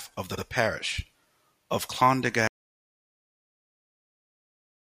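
Just after "of the", at 0.37 to 0.44 s, the speech stutters: a run of compressed frames was repeated, replaying about 70 ms once more (repeated frames). From 2.48 s the sound cuts to total silence, without room tone, through the end, likely because the input was lost while zeros kept being written (audio dropout to silence).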